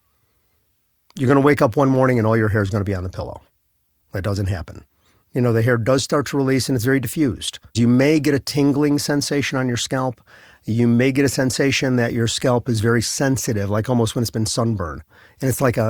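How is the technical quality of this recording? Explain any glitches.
Nothing in this speech recording jumps out as a glitch, so there's nothing that needs explaining.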